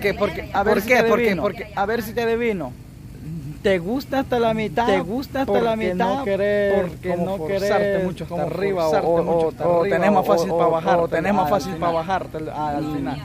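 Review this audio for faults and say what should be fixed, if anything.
There's a doubled audio track running the whole way through: a second, full-band copy of everything trails the original by about a second, at roughly the same level, with no decay or room colour on it. Because it's so clean and so late, it reads as a distinct repeat rather than an echo. The likely cause is the same source being captured twice, once through a slower path, or an edit that left two copies out of step. To prevent it, make sure each source is routed and recorded through only one path, and check edits for duplicated layers before export.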